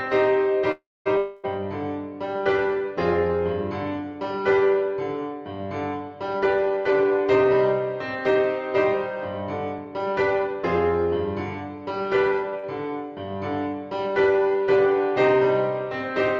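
Right at the start, around 0.71 to 1.08 s, the sound stops moving forward: the last bit carries on as a fading buzz for about a tenth of a second, then goes silent for about 240 ms before the audio resumes exactly where it left off. That's a call audio freeze. Packets were most likely held up in transit and the jitter buffer ran dry, so the receiver stretched what it had and then waited. Nothing gets lost, but the whole stream ends up about 0.34 s later than before. Straight after, from 1.18 to 1.45 s, there's a second filled stretch of roughly a quarter second. This one fades without reaching silence, and when the audio comes back it has jumped ahead, skipping about 260 ms. That points to a long network dropout, likely a run of packets that never arrived at all, so unlike the freeze this material is gone for good. Later there are two spots where everything runs hurried but the pitch stays put: 6.39 to 7.54 s at about 117% speed, and 9.78 to 10.55 s at about 113%. 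That's jitter buffer speed-up. After packets bunch up, the buffer holds more than its target, so the receiver trims tiny pitch-period-sized slivers over and over to catch up. In total it cuts about a fifth of a second in the first stretch and about a tenth in the second. Around 12.50 to 12.66 s there's a short stall from a late packet. A packet was missing when it was due, so the sound is held about 31 ms too long with a slight buzz or dip, then carries on with nothing missing. Overlapping it, from 12.59 to 12.65 s, is a short concealed packet loss. About 40 ms never made it to the decoder in time, and the receiver papered over it by extending the previous sound for about 43 ms before blending back in. What you hear is a brief smear or wobble there.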